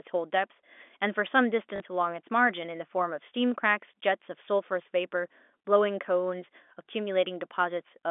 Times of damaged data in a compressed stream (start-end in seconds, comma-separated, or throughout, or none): none